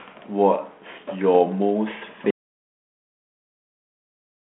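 Speech over a narrowband phone line, with nothing above 3.8 kHz, consistent with G.726 ADPCM at 32 kbit/s. At 2.30 s the audio drops out to silence. This is silence with no room tone, running to the end. A lost or disconnected input is the likely cause.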